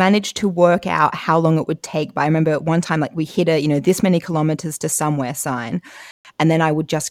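At 6.11 s the speech drops to silence for about 0.14 s, until 6.25 s. Likely a Bluetooth stall, where delayed packets let the headphone buffer run dry.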